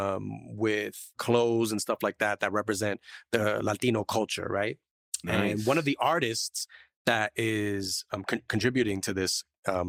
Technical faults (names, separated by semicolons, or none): none